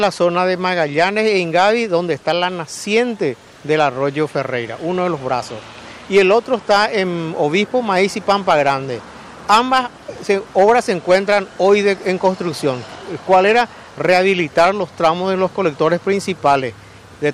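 No technical faults can be heard anywhere in this audio. There is nothing here to place on a timeline.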